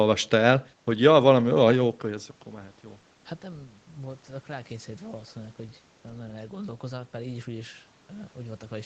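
No technical faults can be heard in this speech.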